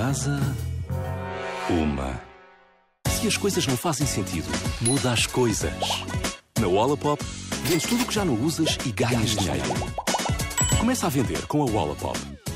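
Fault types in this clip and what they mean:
Doubled audio track: from 9.00 to 10.80 s a second full-band copy of the sound runs about a tenth of a second behind, roughly 5 dB quieter. It has no decay or room colour and starts and stops abruptly. A slower second capture path is the likely cause.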